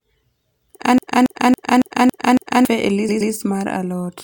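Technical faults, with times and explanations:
0.98 to 2.65 s, CD stuck on one turn. The same 0.28 s slice of speech plays six times in a row, each pass cut off by a brief mute. A scratch is throwing the laser back one track at the same point on every rotation, so the player keeps rereading one revolution's worth of audio. That produces the quick, evenly spaced stutter typical of a skipping disc, with the phrase unable to move on until the pickup clears the flaw.
3.09 to 3.33 s, repeated frames. A 0.12 s block of speech is heard again twice over, stretching this passage by 0.24 s. A short run of compressed frames was written or sent more than once, and the decoder plays each copy as if it were new audio. The result is a short stutter where the same fragment returns, and the timing suggests a run of several small codec frames rather than one long one.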